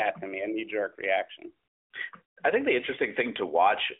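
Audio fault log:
No faults heard anywhere in this recording.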